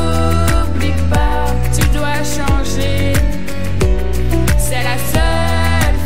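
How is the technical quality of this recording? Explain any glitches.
The recording has one technical fault, present from start to finish: a DC offset. The whole waveform sits shifted away from zero by a constant amount of about -17 dBFS. The signal is riding on a fixed level instead of centring on silence. The offset itself is not audible as a tone or noise. It eats into headroom, though, so peaks reach clipping sooner. On an analyser it appears as steady energy at 0 Hz, the very bottom of the spectrum.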